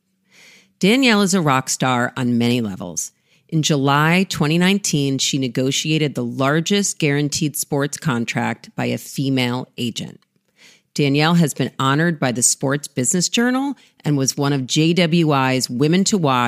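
No technical faults can be heard anywhere in the speech. There is no moment in the recording that stands out as a problem.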